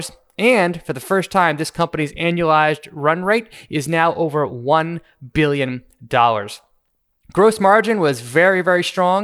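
From 0 to 4.25 s, the resampler restarted on every block, leaving evenly spaced 4 Hz ticks at each 250 ms block edge, present only under speech.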